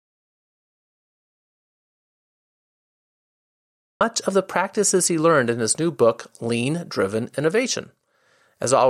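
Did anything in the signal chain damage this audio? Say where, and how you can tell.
Yes. The input was likely lost upstream, from a disconnected device, failed link or mute, while the recorder kept writing silence, an audio dropout to silence. From the start to 4.01 s there is dead silence with no room tone, and the speech resumes mid-flow at "of the practices he".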